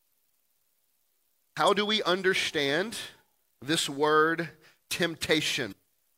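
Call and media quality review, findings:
Damaged data in a compressed stream, 1.68 s, just before "do we understand": brief disruption. Decoder hits corrupted bytes, misreads the frame, loses sync, resumes at next valid header.

Damaged data in a compressed stream, 5.68–5.73 s: longer disruption, about 44 ms. Same mechanism: corrupted frame data, decoder output garbled until it resyncs on a clean frame. Probable component: transport or storage layer ahead of the codec.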